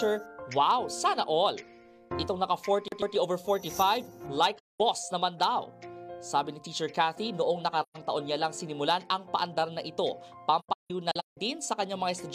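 A CD stuck on one turn at 2.88 to 3.16 s replays a 137 ms slice of the audio twice, each jump back leaving a brief mute, which is the quick, even stutter of a scratched disc. AAC frame loss with muting leaves soft-edged holes at 4.57 to 4.80 s (about 213 ms), 7.82 to 7.97 s (128 ms), and 10.59 to 11.37 s, where about 470 ms of gaps are scattered, the longest around 150 ms. Each gap fades out and back in because the decoder zeroed the missing frames' spectrum.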